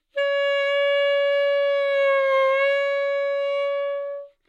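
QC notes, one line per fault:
No faults found.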